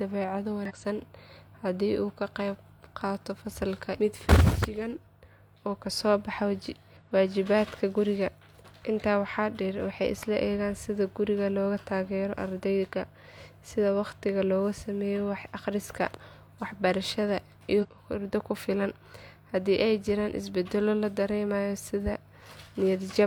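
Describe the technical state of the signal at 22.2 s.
At 22.2 s the speech signal is intact, with no audible fault at that moment.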